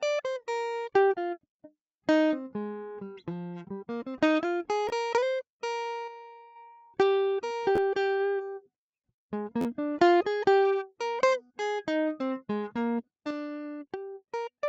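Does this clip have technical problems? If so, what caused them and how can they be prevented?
Yes. Three times the playback device ran out of fresh audio and replayed its last block, a repeated buffer whose length of about 11.6 ms fits a 512-sample buffer. At 4.89 s one extra play gives a click, losing roughly 10 ms. At 7.76–7.78 s and 9.61–9.65 s, two and three replays make buzzy stutters, losing roughly 20 and 40 ms of music. Larger buffers or higher audio-thread priority prevent this.

One channel drops out from 6.08 to 6.56 s and again from 13.31 s to the end, likely from a stereo channel going missing before the mono fold-down. Material shared by both sides falls abruptly by about 6 dB, and anything only on that side vanishes. Secure cables, connectors and channel routing prevent it.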